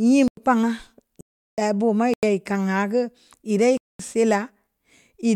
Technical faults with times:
0.28-0.37 block of digital silence
1.21-1.58 block of digital silence
2.14-2.23 block of digital silence
3.77-3.99 block of digital silence

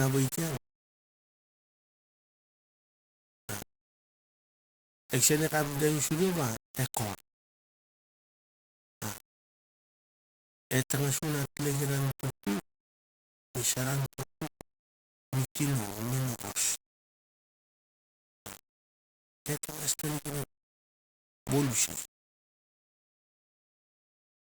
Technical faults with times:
0.00-24.40 low bit depth without dither

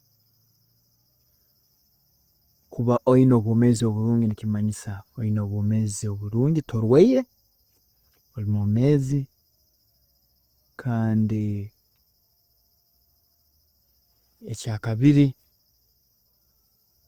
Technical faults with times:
0.00-17.08 Opus compression

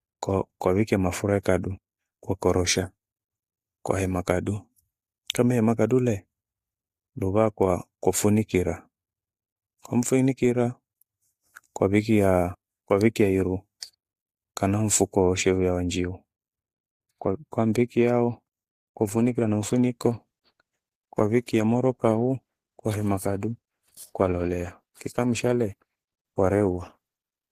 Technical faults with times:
18.95-27.52 adaptive stream at a lower bitrate

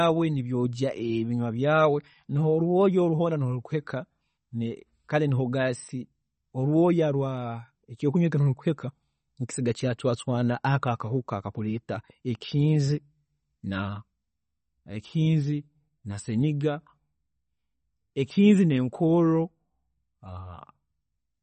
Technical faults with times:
0.00-21.43 MP3 compression

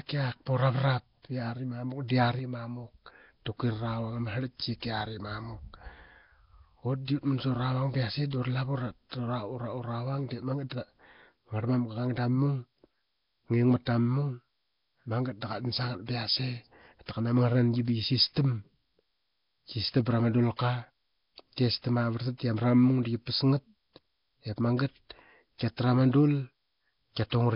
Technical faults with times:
0.00-27.55 Nellymoser compression
2.39-2.88 sudden gain jump

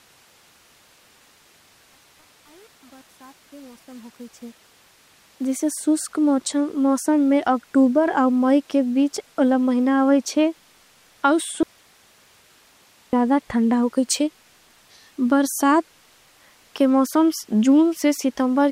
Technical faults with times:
11.63-13.13 audio dropout to a faint residue

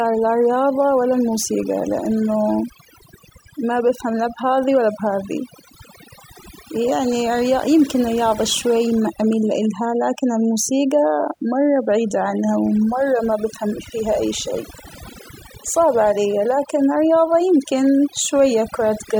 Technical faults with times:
0.00-19.19 overdone noise removal

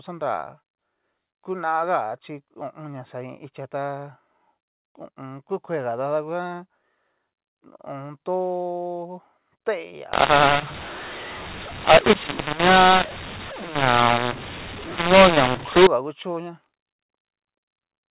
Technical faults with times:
10.13-15.87 mu-law and A-law mixed up

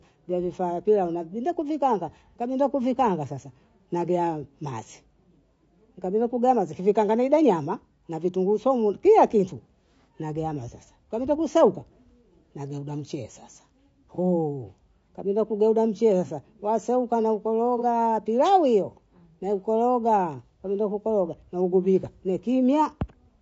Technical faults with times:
0.00-23.42 low-delay AAC compression
14.14-14.19 AAC frame loss with concealment
17.78-17.83 AAC frame loss with concealment

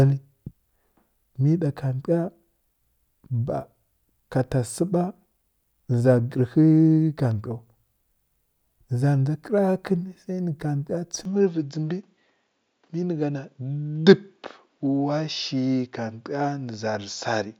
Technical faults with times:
11.25-17.59 input switched to a poorer device

